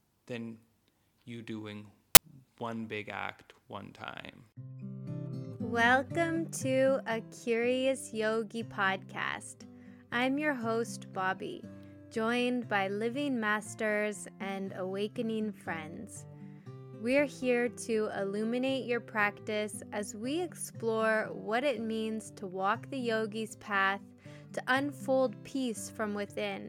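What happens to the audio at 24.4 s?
Nothing goes wrong at 24.4 s; the audio continues intact through that moment with no audible dropout, glitch or distortion.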